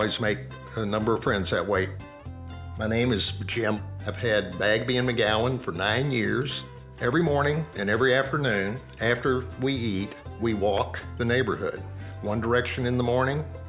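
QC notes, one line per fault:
No faults found. Nothing in this audio needs a QC line.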